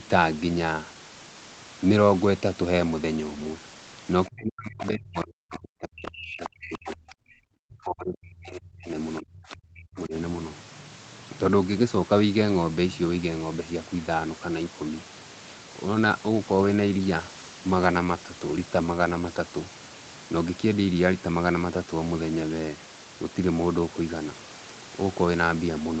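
From 4.27 to 8.97 s and again from 9.2 to 10.14 s, the speech is suppressed in double talk, likely because the echo canceller could not separate the talker from the loudspeaker echo and turned both down. The level falls by up to about 40 dB, which shows as hollowed, broken stretches in the waveform envelope.

Inside the first stretch, the other side's voice leaks through at 4.82 s and from 6.43 to 6.67 s. These are faint scraps, likely residual echo, about 15 dB below the talker, visible as thin, separate harmonic traces on a spectrogram.

From 15.73 to 20.45 s, a call bitrate drop roughens and muffles the sound. It points to the Opus rate falling from around 32 to 17 kbps for nearly 3.7 s. The spectrogram shows coarser, smeared texture in the upper bands.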